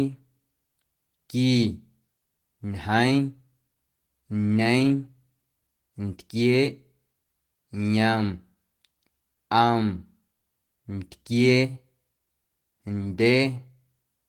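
From the very start the speech carries faint, recurring hiccups, tiny skips where a sliver of sound seems to go missing, spaced unevenly rather than on a steady beat. This is clock drift between sender and receiver: the sending end's audio clock runs fast, by something like 4 percent, so samples arrive quicker than the receiver plays them out. Its jitter buffer keeps creeping toward overflow, and the receiver has to shed material to keep it in bounds.

Those shedding steps are the repeated timing corrections, heard from 0.07 s through 14.05 s as a slightly hurried, uneven tempo with small catches in the flow. Because the incoming stream runs at about 104 percent of the playback rate, the receiver trims short pieces again and again, always in the same direction. Each cut is brief and small, but their irregular spacing gives the delivery a faintly stumbling quality across the whole stretch.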